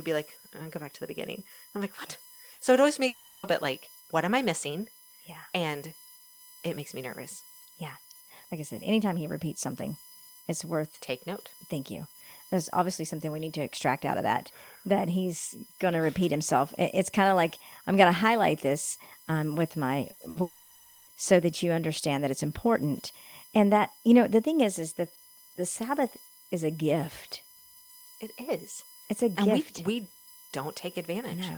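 Running under the whole speech clip is a USB whine, a fixed tone built on 1 kHz with its strongest component up at 22 kHz, sitting roughly 25 dB below the speech. That's the bus's 1 ms frame current getting into the power or ground.

At 2.53 to 2.62 s there's a burst of packet loss. About 60 ms went missing, and the receiver held the last sound as a short fading buzz or hiss before jumping ahead.

Just after "it always", from 3.07 to 3.46 s, a long network dropout hits. About 360 ms of sound is replaced by a held, decaying continuation of the last sound, and then the audio resumes at "bit like what am" with that stretch gone. This is likely a stall in the network stream.

Two more packet-loss bursts come close together, at 20.11 to 20.20 s and at 20.29 to 20.38 s, the second right after "this um with my". Each drops about 60 ms and papers over it with the same brief fading fill.

Straight after those, from 20.41 to 21.10 s, another long dropout swallows about 660 ms. 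You hear a smeared continuation that dies away, and then it picks up again at "so that you understand".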